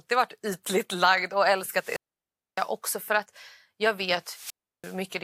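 A speech clip with two wireless microphone squelch dropouts. Hiss rises, then the sound falls to near silence: after "varit ytligt lagd och" (1.73–2.72 s, about 0.61 s muted) until "för att jag", and again after "för att jag" (4.22–5.04 s, about 0.34 s). A fading radio signal triggered the receiver's squelch.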